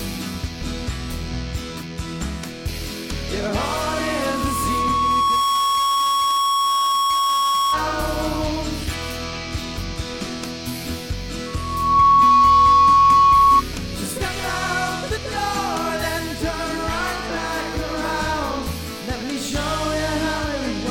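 A steady 1.1 kHz tone swells over a couple of seconds from 3.60 to 7.89 s, then returns faster and much louder from 11.46 to 13.62 s. This is loudspeaker feedback squeal: the microphone re-amplifies its own loudspeaker until that frequency runs away.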